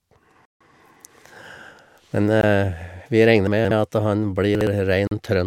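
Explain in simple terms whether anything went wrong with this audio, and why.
Three times the speech drops to silence and then carries on: from 0.45 to 0.61 s (about 150 ms), a very brief gap at 2.41 s (under 20 ms), and from 5.07 to 5.11 s (about 40 ms). These are most likely Bluetooth stalls. Radio interference delays the wireless packets, the headphones run out of stored audio to play, and playback stops until the resent packets arrive.

Two other moments sound jumbled rather than silent. These are chunks out of order. Between 3.47 and 3.71 s, a 60 ms piece of audio arrives late and plays three pieces after where it belongs. Between 4.55 and 4.67 s, another 60 ms piece plays one place late. No sound is lost, but the sequence is wrong, and each misplaced piece creates hard joins where the audio jumps.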